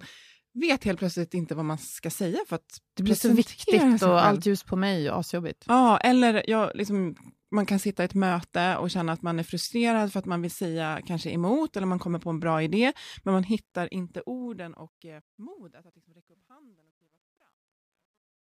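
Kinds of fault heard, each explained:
Truncation distortion on a fade: from 13.53 s, after "bra idé men man", the fade-out is requantised without dither, consistent with a 12-bit gain stage. The waveform collapses into coarse steps, so the tail turns gritty, worst from 15.71 to 18.48 s.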